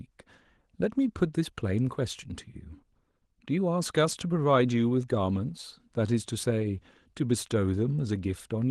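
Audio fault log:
No fault found in the audio.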